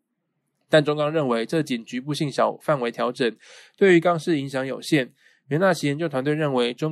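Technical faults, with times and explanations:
Nothing stood out on listening to the speech in this recording.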